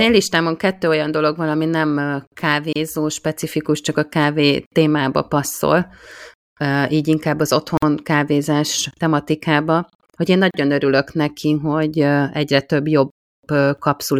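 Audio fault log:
2.73–2.76 s, 7.77–7.82 s, 10.51–10.54 s: gap at a join of encoded pieces. Silences of about 29, 50 and 35 ms open mid-phrase after "dolog van ami nem", "így inkább az" and "kávézás tematikába hogy én", where separately encoded pieces were joined with their start-up delay and end padding left in. Unlike a dropout, nothing is lost: the sound resumes exactly where it stopped, with smeared edges.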